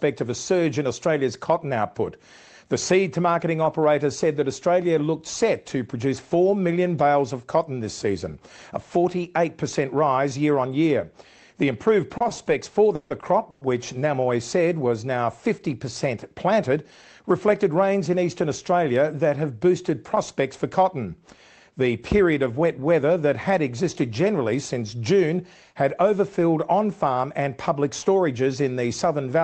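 From 12.17 to 12.49 s there are repeated stalls (stutter). Late packets emptied the jitter buffer four times, and each gap, the longest 30 ms, was filled by repeating the last sound. A spectrogram shows short smeared, flattened patches. At 12.95 to 13.12 s and again at 13.50 to 13.63 s, call audio freezes hold the sound for 150 ms and then 110 ms as a fading buzz, likely because packets were held up in transit. The waveform shows repetitive periodic blocks with no true silence. At 13.20 s a short stall from a late packet stretches the sound by 20 ms, which appears as a brief smear with a slight dip. From 16.52 to 17.69 s a jitter buffer speed-up plays the sound at 109% without changing pitch, cutting about a tenth of a second. Harmonics stay level in the spectrogram while events sit closer together. Throughout, the call codec's band stops near 8 kHz.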